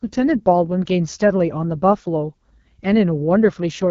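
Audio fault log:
Throughout, AMR wideband (HD Voice) codec: the speech has passed through a low-rate AMR-WB encoder, and the roughness fits its second-lowest mode, around 8.85 kbit/s. Below 6.4 kHz the voice is rebuilt from a pulse-excited vocal tract model with too few bits, so it comes out plainly raspy and gritty. Above that the band is only shaped noise, and nothing at all is heard above 7.2 kHz.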